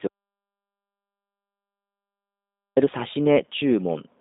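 Speech squeezed through a G.729 codec: nothing above 3.7 kHz or below 250 Hz, with a rough, synthetic buzz that plain band-limiting wouldn't add, which fits 8 kbit/s. An audio dropout to silence runs from 0.07 to 2.77 s, losing 2.7 s as dead silence with no room tone, unlike a noise gate, which would leave a trace of background. The likely cause is a lost input.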